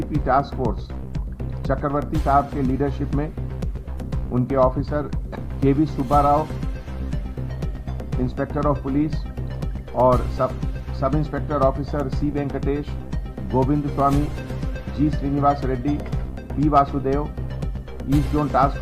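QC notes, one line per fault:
Nothing stood out on listening, so there is no fault to log.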